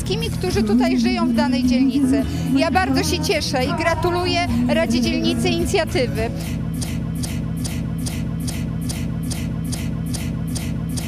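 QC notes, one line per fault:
6.84 s to end: broken-record loop. A 0.42 s fragment repeats exactly, back to back, about ten times until the clip ends, and the audio that should follow is lost. Likely cause: the player, encoder or stream stalled and kept resending its last buffered piece.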